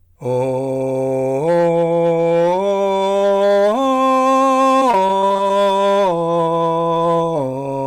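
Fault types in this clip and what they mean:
Hard clipping: The music is driven about 7 dB past what the signal path can pass, so around one sample in twenty has its peak sliced flat. Those flattened tops add high harmonics, heard throughout as a harsh, gritty fuzz on every loud passage.
Repeated packet loss (robotic sound): From 4.79 to 5.55 s the music breaks into a run of brief dropouts, none longer than about 19 ms, each patched by extending the preceding sound. The rapid succession of patched holes makes this stretch choppy, with pieces missing.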